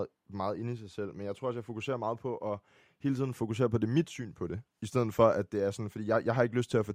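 No technical faults can be heard anywhere in this speech recording. At no point does anything in the audio stand out as a fault.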